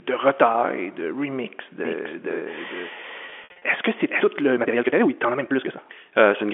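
A doubled audio track runs from 1.85 to 4.21 s: a full-band second copy of the speech, about as loud as the original, trails it by roughly half a second. It has no decay or room colour and cuts in and out abruptly, most likely from a second, slower capture path or an edit holding two copies out of step.

Packet loss with pitch repetition falls between 3.26 and 3.62 s, inside the doubled stretch. About 180 ms of audio went missing in scattered gaps across those 360 ms, the longest being 60 ms. The receiver filled each gap by repeating the last pitch period, so the speech briefly sounds held and buzzy in places, with the narrow telephone band of the G.711 line still audible underneath.

A time-stretched section runs from 4.50 s to the end. The speech there plays at 1.79 times normal pace with its pitch unchanged, so it sounds rushed. Short pieces were dropped to shorten it, likely by software squeezing the audio to fit a length.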